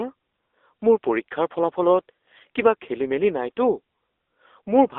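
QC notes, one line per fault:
Throughout: AMR narrowband mobile codec. The speech sits in a telephone band of roughly 300 Hz to 3.6 kHz with nothing above. It has a plainly audible buzzy, synthetic edge from the pulse-driven vocal-tract model, which fits a low AMR-NB mode around 7.4 kbps.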